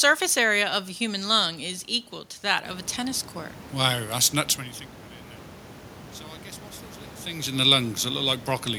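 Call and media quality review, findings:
No faults found in the speech clip. Room noise rises by about 13 dB at around two and a half seconds but stays about 21 dB below the speech, and the gradual level changes follow smoothly.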